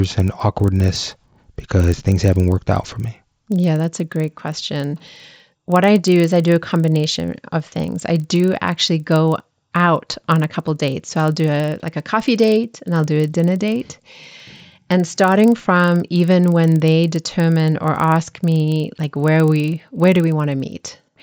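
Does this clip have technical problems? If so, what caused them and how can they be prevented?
Yes. Throughout the speech, a resampler restarted on every block leaves a 25 Hz buzz: each 40 ms block, likely upsampled from 16 kHz to 48 kHz, gets converted without its neighbours, so every edge ticks. Unlike underrun clicks, these are perfectly regular and vanish in silence. Keep the resampler's filter state running across blocks.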